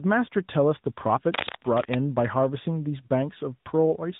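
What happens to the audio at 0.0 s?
Tandem speech coding is present from 0.0 s and throughout: the speech was decoded and re-encoded by two speech codecs in a row, so it sounds rough, muffled and warbly. A spectrogram would show nothing above 3.8 kHz and smeared harmonics.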